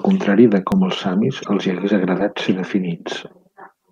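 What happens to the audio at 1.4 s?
At 1.41 to 1.47 s there is damaged data in the compressed stream: for about 64 ms the decoder misreads corrupted frames, loses sync and hunts for the next valid frame header, producing a short glitch just before "els hi hagués". On a spectrogram it shows as a brief vertical break in the surrounding speech harmonics. The waveform has an abrupt, misshapen segment with hard edges.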